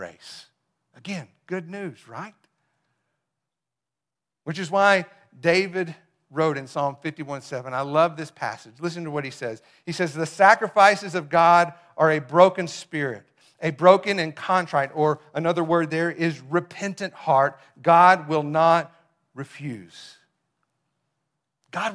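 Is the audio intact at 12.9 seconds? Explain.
Yes, the speech at 12.9 seconds plays through intact, with no audible fault at that moment.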